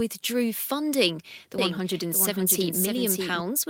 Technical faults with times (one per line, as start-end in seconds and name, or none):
1.58-3.40 doubled audio track